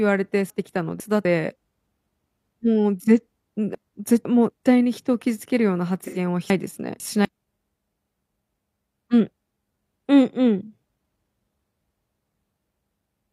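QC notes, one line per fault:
0.5–1.25 s, 3.75–4.5 s, 6.5–7.25 s and 9.0–9.75 s: chunks out of order. In each 0.75 s window, one 250 ms chunk plays two chunks late, after the two chunks that should follow it. No audio is missing, but the speech runs out of sequence for a moment and sounds jumbled. There are three hard joins where the chunks meet.
6.04–6.18 s: AAC frame loss with concealment. About 85 ms of coded audio, which fits two lost frames, is missing. The decoder fills the gap by extending the last good spectrum with altered phase and interpolated energy instead of the real signal. Because the gap is short, there is no fade to silence. It comes through as a brief smeared, noisy and phasey patch before the clean decode resumes.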